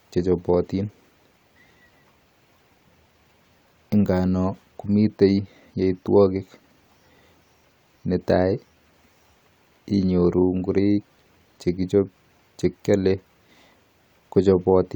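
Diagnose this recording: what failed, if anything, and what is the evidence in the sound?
Nothing failed: there is no evidence in the sound of a fault at any stage of the recording.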